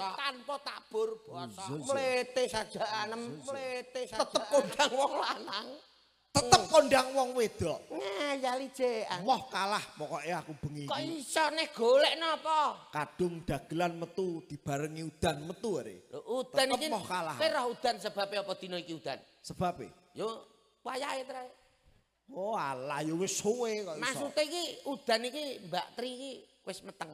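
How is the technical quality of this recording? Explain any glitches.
The recording has one clear fault at the start. From the opening until 4.76 s, a doubled audio track is audible: a second, full-band copy of the sound runs about one and a half seconds behind the original, roughly 5 dB quieter, with no decay or room colouring. It is already running when the clip begins and cuts off abruptly at 4.76 s. The likely cause is the same signal being captured again through a slower path and mixed in.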